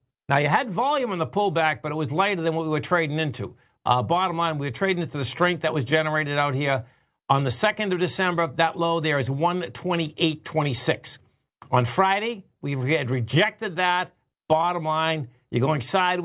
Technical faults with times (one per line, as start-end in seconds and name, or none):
none